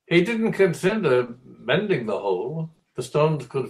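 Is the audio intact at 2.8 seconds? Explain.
No, there's a short concealed packet loss from about 2.75 to 2.81 s. Roughly 40 ms of the call arrived too late to decode, so the receiver patched the gap by extending the preceding sound and easing back into real audio, leaving a quick smeared blip.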